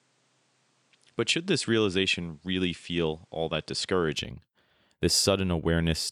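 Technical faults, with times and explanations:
0.0–4.16 s, input switched to a poorer device: the speech has nothing above 10.3 kHz, sits about 5 dB lower and carries a faint noise floor roughly 40 dB down, then clears with no gap. The system likely recorded from a narrower-band microphone first.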